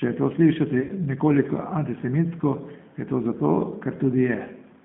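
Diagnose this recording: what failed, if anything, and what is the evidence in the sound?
Codec stage: G.729 coding at 8 kbit/s confines the speech to about 150 Hz to 3.5 kHz. The spectrogram shows a hard ceiling, and the voice sounds rough and synthetic throughout.

Network stage: VoIP packet loss, concealed by the speech codec, from 0.81 to 0.92 s just after "je to slišati". About 60 ms was lost across 80 ms, with the longest run 50 ms. The decoder extrapolated from its last pitch and filter, stretching the sound out as it faded.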